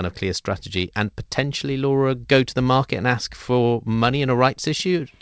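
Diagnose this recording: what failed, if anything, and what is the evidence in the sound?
Nothing failed: the speech comes through the call path as expected, with the wideband call codec stopping everything above 8 kHz.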